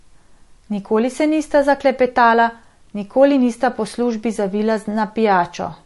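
Throughout the speech there is plainly audible MP3 compression damage. Nothing is heard above about 11.3 kHz. The treble is cut hard there. Weak detail flickers in and out, giving a watery, swirly texture. The low bitrate that fits about 48 kbps is the likely cause.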